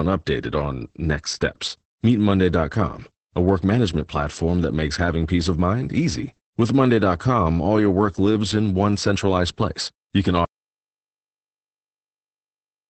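From the start, Opus voice compression at 10 kbps in SILK mode leaves the speech muffled, hoarse and faintly robotic; the spectrogram shows a hard ceiling near 8.7 kHz.

At 10.45 s the audio drops out to silence through to the end, likely from lost input. The waveform becomes a flat line with no room tone.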